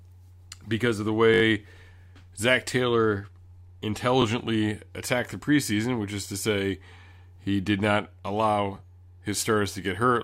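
At 1.34 s the speech stutters: a repeated buffer, where fresh audio arrived late and the device replayed its last block instead. The same slice sounds four extra times through 1.42 s, with a hard join at each repeat and a rate that fits a 20 ms buffer, giving a brief buzzy flutter. Single repeats at 4.22–4.24 s and 7.44–7.46 s come across as short clicks. Playback resumes without any audio lost.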